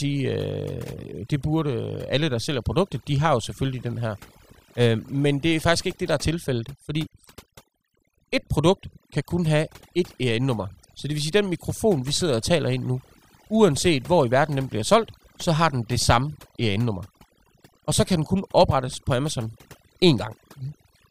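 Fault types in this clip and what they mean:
Overdone noise removal: the noise reduction was pushed way too hard, so any frequency band sitting near the noise level gets pulled down or shut off, taking quiet bits of the speech with it. Throughout the clip, gaps go nearly silent with twinkly specks.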